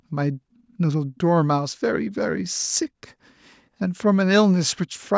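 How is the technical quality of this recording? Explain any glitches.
No glitches; the speech comes through without faults.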